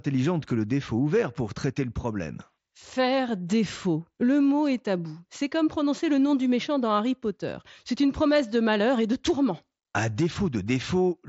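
Nothing here calls for comment, just speech carried over a Bluetooth headset link whose wideband sound fits the mSBC codec, with nothing going wrong along the way.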